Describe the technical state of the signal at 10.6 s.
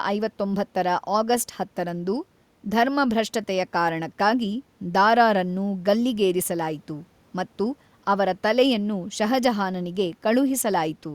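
At 10.6 s the speech signal is intact, with no audible technical fault at that moment.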